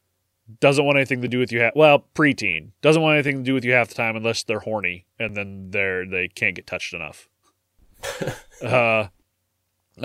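Overlapping chunks at 1.28 s, after "doesn't want anything to", and at 5.29 s, after "time unless they're horny": each new chunk, which fits 2-second chunking, starts before the previous one ended, so about 6.5 ms of speech replays at the join, heard as a brief click-like stutter.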